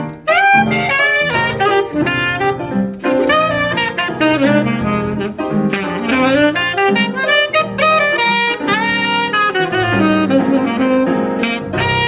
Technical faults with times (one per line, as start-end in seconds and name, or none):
none